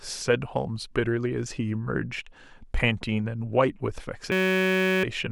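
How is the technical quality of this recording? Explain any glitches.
The recording has one serious glitch near its end. From 4.32 to 5.04 s, a system hang loop repeats one 5.33 ms slice, which fits a 256-sample buffer. This produces a steady 188 Hz buzz.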